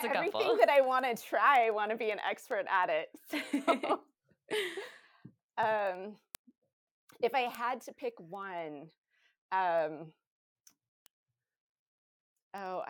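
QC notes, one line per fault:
0.12–12.82 s, word clock ticks: around 150 ticks recur about every 70 ms through the speech. The receiver is likely free-running against the sender's clock, with a mismatch of roughly 300 ppm, so each slip drops or repeats a single sample and clicks.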